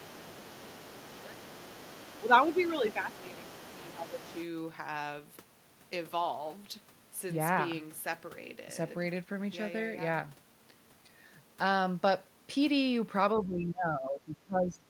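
From the start to 2.25 s, a second, quieter voice sits under the speech at roughly 20 dB below it. This is the other side's voice leaking through. It is likely residual echo: the far end plays on the talker's loudspeaker, the microphone picks it up, and the echo canceller leaves part of it in the signal. The leak returns from 2.42 to 4.45 s at a similar low level.

Inside those stretches the talker's own speech sags. The dips run from 0.11 to 0.2 s, 1.16 to 1.36 s, 2.2 to 3.45 s and 3.74 to 4.35 s, at around 10 dB and up to about 15 dB at 1.16 s. This is speech suppressed in double talk. The likely cause is an echo canceller that could not separate the near talker from the loudspeaker signal while both were active, so it pulled down the whole microphone path. A deeper drop of about 20 dB runs from 13.39 s to the end.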